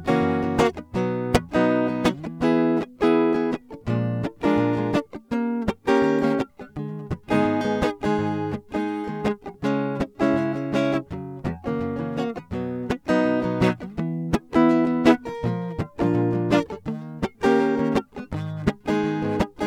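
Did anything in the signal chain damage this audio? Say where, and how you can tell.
No, nothing in the signal chain damaged this music.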